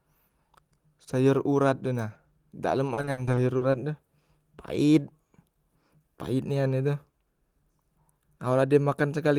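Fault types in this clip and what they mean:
Repeated packet loss (robotic sound): from 2.93 to 3.75 s the speech breaks into short holes, the longest 60 ms, each filled by repeating the last sound, which leaves it choppy and robotic. A spectrogram shows smeared, frozen frames, and the waveform shows blocky repeated cycles.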